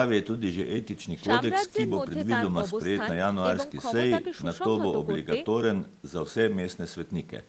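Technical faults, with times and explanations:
The speech carries the usual traits of a normal call chain, with the lowest bass trimmed by the microphone processing and the Opus codec's band limit leaving nothing above 8 kHz, and no technical faults can be heard.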